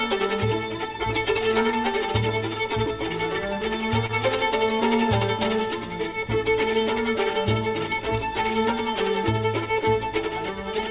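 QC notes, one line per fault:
4.06–4.10 s, short concealed packet loss: a brief smear where 30 ms of audio arrived too late, so the receiver extended the preceding sound for 29 ms before blending back into the real signal, adding roughly 10 ms, all within the G.711 A-law path's 4 kHz band.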